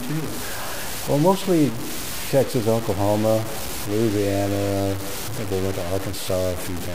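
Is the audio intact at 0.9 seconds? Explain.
No. At 0.9 seconds, as across the whole clip, the sound shows low bit depth without dither, likely from truncating to about 4 bits. The rounding error follows the signal at roughly 10 dB below it, so quiet passages turn gritty and sputter.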